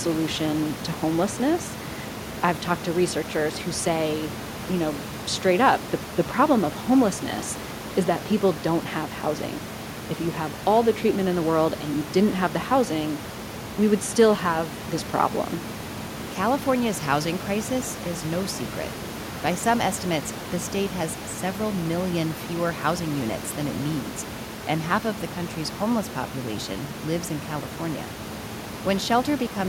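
No technical faults are present in the speech; the room noise about 13 dB below it belongs to the recording, not the system.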